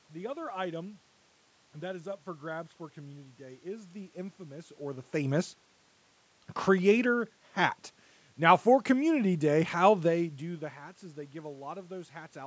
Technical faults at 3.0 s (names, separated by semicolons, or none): none